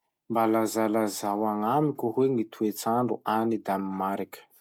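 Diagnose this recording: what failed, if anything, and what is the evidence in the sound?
Nothing failed, and the sound carries no evidence of a fault at any stage of the recording chain.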